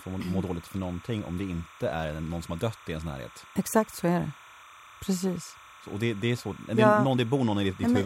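Timecode bleed runs under the speech for the whole clip: linear timecode leaking from an adjacent line chirps steadily around 1 and 2 kHz, roughly 25 dB down, its rhythm fitting 30 frames per second. A spectrogram shows two unbroken horizontal bands there.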